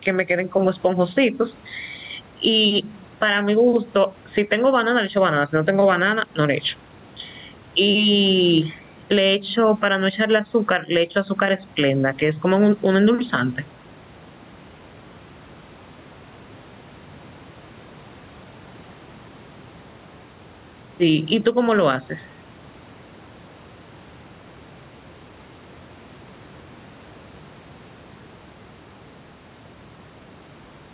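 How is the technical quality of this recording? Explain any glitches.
The recording has one fault, gain pumping, present throughout. It sits on top of a telephone-band signal with nothing above 4 kHz, which fits a G.711 mu-law call path, and room noise roughly 36 dB below the speech.

Gain pumping runs for the whole clip. The gain swings by around ten decibels as speech comes and goes. The likely cause is input gain set far too high, with a fast limiter or compressor clamping each loud syllable. Loud and quiet passages end up squashed toward one level. On a waveform the gaps between phrases look raised and the peaks flattened. On a spectrogram the noise floor visibly brightens in pauses and darkens under speech.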